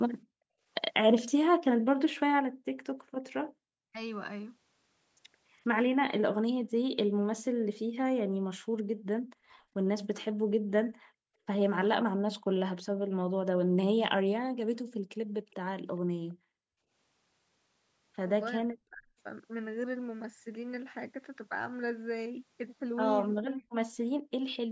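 A speech recording from a call with several echo-canceller faults. Speech suppressed in double talk occurs at 0.44 to 0.52 s and 18.61 to 19.14 s, where the talker's own speech drops away steeply, the later dip lasting about half a second. The likely cause is the canceller failing to separate local speech from loudspeaker echo while both sides spoke. Unlike background gating, the talker's speech itself is cut. An echo leak appears at 1.16 to 1.22 s and again at 15.51 to 16.34 s as a faint, then fainter, copy of the speech trailing 412 ms behind. It is likely the far end's residual loudspeaker echo being sent back. Its fixed delay marks it as a repeat rather than room reverberation. Background gated by the echo canceller shows at 2.46 to 2.65 s, 6.63 to 11.46 s (intermittent, about 2 s in total), 12.40 to 12.51 s and 23.52 to 24.31 s. During these spans the room sound falls by about 40 dB and then returns.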